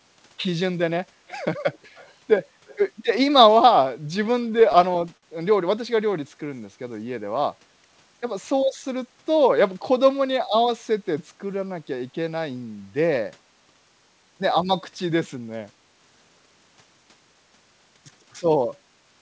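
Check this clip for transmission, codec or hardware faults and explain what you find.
Three faults are audible: an echo leak early on, a run of repeated stalls (stutter), and a jitter buffer slow-down shortly after.

The echo leak appears at 1.27 to 1.39 s, 1.73 to 1.78 s, 1.95 to 2.14 s and 2.66 to 2.77 s. The likely cause is a far end playing the call on a loudspeaker whose echo canceller failed to remove everything its microphone picked up, so that residue was returned. The result is faint scraps of the voice trailing about 225 ms behind, very low, roughly 25 to 35 dB under the speech.

The repeated stalls (stutter) run from 4.24 to 5.25 s. Packets were arriving late, so the jitter buffer drained eleven separate times. At each gap the receiver stretched the last sound until fresh audio arrived. The longest hold was 53 ms, and about 147 ms was padded in total, roughly a seventh of that second. 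No sound is lost, but the passage drags and catches in a halting stutter.

The jitter buffer slow-down spans 6.07 to 6.61 s. With the buffer short on reserve, the receiver repeated individual pitch periods and bits of pause to rebuild its cushion, adding 62 ms. That stretch plays at 90% speed without any change in pitch, so sounds come out drawn-out and slightly sluggish. The band-limited call sound, with nothing above 8 kHz, fits the G.722 codec carrying the audio.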